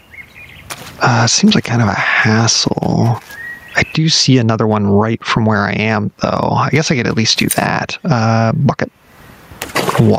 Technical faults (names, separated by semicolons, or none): gain pumping